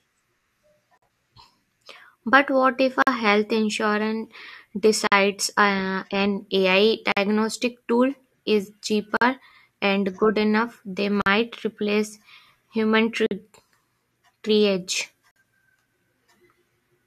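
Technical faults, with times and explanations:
0.98, 3.02, 5.07, 7.12, 9.17, 11.22, 13.26, 15.31 s, gap at a join of encoded pieces: The speech drops out for about 46 to 48 ms every 2.0 s. One comes just before "uh an", one between "tool is" and "and good enough", one before "replace human". Each 2 s piece was encoded on its own and then joined untrimmed. The encoder's start-up delay and last-frame padding stay in as silence. The edges are smeared by the codec, and the speech resumes where it stopped.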